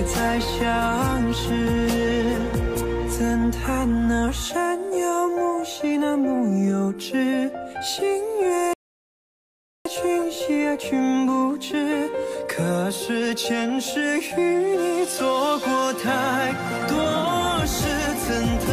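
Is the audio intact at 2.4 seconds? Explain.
Yes, the audio is intact at 2.4 seconds, with no dropout, click, distortion or other fault at that moment.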